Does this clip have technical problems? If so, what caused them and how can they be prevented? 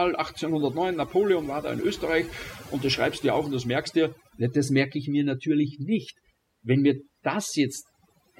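Yes. Overdone noise removal runs throughout the speech. Bands near the noise estimate are cut, so the background twinkles and quiet parts of the voice are lost with them. Prevent it by setting the noise reduction gentler.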